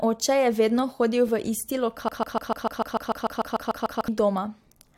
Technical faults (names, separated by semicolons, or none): broken-record loop